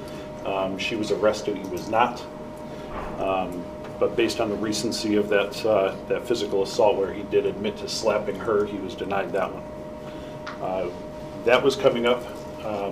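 No technical faults are audible.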